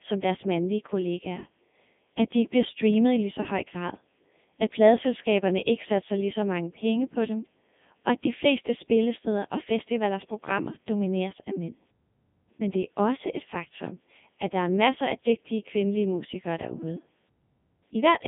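Throughout, the speech has heavy Codec 2 vocoder damage at 3.2 kbit/s: it's rebuilt from pitch and envelope as sine waves, so it's robotic and buzzy, banded 150 Hz to 3.6 kHz.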